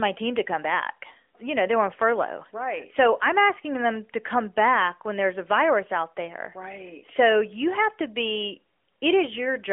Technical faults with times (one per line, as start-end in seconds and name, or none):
none